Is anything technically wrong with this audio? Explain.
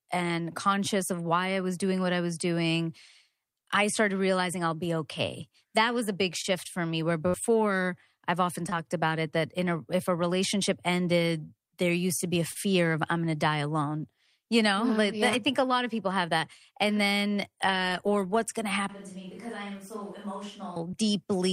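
Yes, there are three kinds of fault in this speech recording.

Short concealed packet loss occurs four times: at 6.41–6.46 s, between "was a big" and "for me where"; at 8.70–8.73 s, between "I've often" and "about it that in"; at 12.51–12.57 s; and at 20.91–20.95 s. Each time, roughly 20 ms of audio (40 ms at 12.5 s) failed to arrive, and the decoder bridged the hole by extending the preceding sound. The result is a brief smear or wobble.

A burst of packet loss occurs at 7.28–7.36 s, right after "for me where". About 60 ms of consecutive audio was lost. The receiver extrapolated the last sound and faded it, so a short held buzz or fading hiss replaces the missing material before normal playback resumes.

From 18.89 to 20.76 s the sound abruptly turns hollow and roomy and drops by about 10 dB. Room noise rises to roughly 25 dB below the speech. This is likely a switch to a distant microphone after the close one dropped out, and it switches back just as abruptly.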